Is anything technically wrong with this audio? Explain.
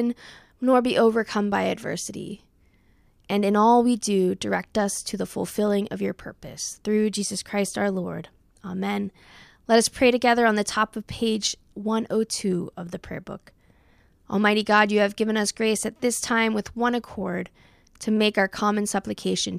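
No, nothing technically wrong stood out on listening to this speech recording.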